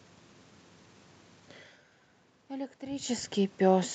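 Nothing in this speech clip points to a technical fault; the changes in loudness around 1.5 s and 3 s sound like the talker shifting position at the microphone, and the room's background noise is simply part of the recording.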